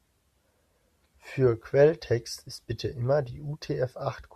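No faults detected in this speech recording; nothing to flag.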